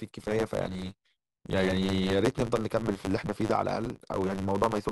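From start to finish, the speech carries a steady buzz at 100 Hz. It comes from a block size mismatch, truncated type. One stage writes longer blocks than the next stage takes in, so the tail of every block is dropped. The buzz sits at the block rate, which fits blocks of 512 samples being written. Because audio goes missing each time, the speech runs about 1.16 times too fast. The timbre stays the same.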